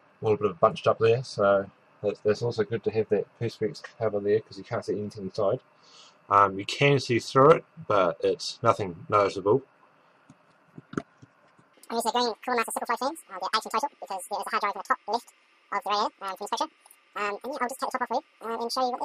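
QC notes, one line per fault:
11.74–19.05 s, audio read two samples at a time (double speed): from 11.74 s to the end the sound plays twice as fast and a full octave (12 semitones) higher, because the reader groups sample pairs into single frames as if the data were two-channel or twice as wide. On a spectrogram every partial jumps up by a factor of two. The waveform's cycles visibly halve in length.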